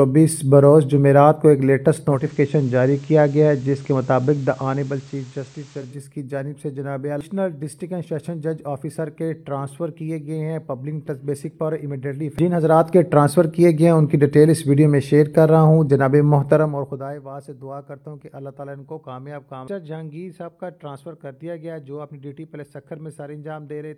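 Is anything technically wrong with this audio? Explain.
Yes. Digital radio blending to analogue occurs from 2.07 to 6.0 s: the receiver loses its digital stream and cross-fades over about 234 ms to the FM broadcast and back, so the level drops about 2 dB, and a faint hiss appears.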